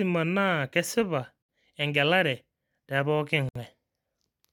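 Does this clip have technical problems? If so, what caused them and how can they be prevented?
Yes. The speech drops into brief silences at 1.42 to 1.49 s, right after "naa kesipa" and before "engelare te pookin", and again at 3.49 to 3.55 s, after "kesipa engelare te pookin". Each hole lasts about 67 ms, with softened edges, and the speech resumes exactly where it stopped. These are gaps at a join of encoded pieces. The audio was encoded in 2.0 s chunks and then joined. Each chunk kept its encoder start-up delay and its padded final frame, leaving dead air at every seam. To prevent this, encode the audio as one continuous stream, or trim each chunk's encoder delay and padding before joining.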